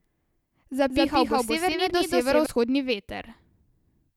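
From 0.90 s to 2.46 s the speech carries a doubled audio track. A second copy of the same sound runs behind the first by about a fifth of a second. It is roughly as loud as the original. The copy is full-band and dry, with no decay or room colour. It cuts in abruptly and drops out just as suddenly. The likely cause is the signal being captured twice, once through a slower path.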